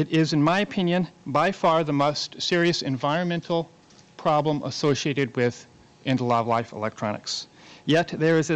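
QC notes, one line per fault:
No faults to note.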